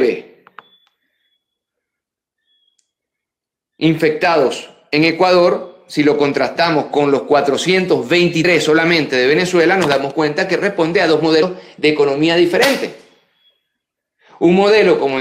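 At 8.44 s there is a case of compressed frames skipped. A short stretch of the encoded audio was never decoded, so playback leaps forward by about 70 ms, roughly three frames, which fits a frame length of about 26 ms. Unlike a dropout, no silence is inserted. The sound simply resumes a little further along.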